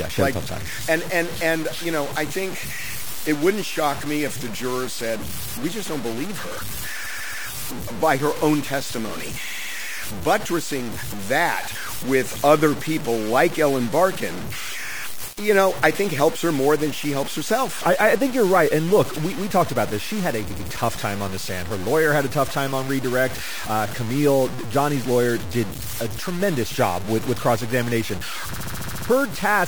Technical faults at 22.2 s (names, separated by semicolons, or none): low bit depth without dither